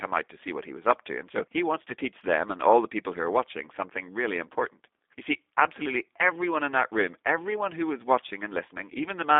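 From start to finish the speech carries G.729 codec damage, plainly audible throughout. The coder rebuilds each 10 ms frame from a vocal tract filter, a pitch predictor and a handful of pulses rather than sending the waveform, so voiced sounds come out rough and faintly synthetic, consistent with an 8 kbit/s stream. The line band runs from about 250 Hz to 3.6 kHz, leaving the audio thin, with no low body and no air above that limit.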